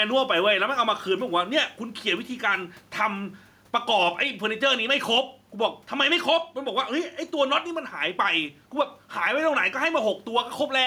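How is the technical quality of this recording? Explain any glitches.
The recording has one audible problem, gain pumping, present throughout the speech. Gain pumping runs the whole clip: the level is likely set far too high at the microphone, with a fast limiter or compressor clamping down whenever the speech gets loud. The gain swings by around 5 dB, and the faint room noise sits roughly 43 dB below the speech. Loud and quiet passages sit closer together, giving a squashed, breathing sound.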